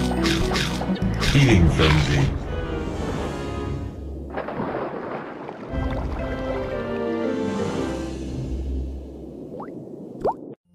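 A short glitch at 0.93 to 0.99 s is damaged data in a compressed stream. Corrupted bytes made the decoder misread frames and resynchronise at the next header.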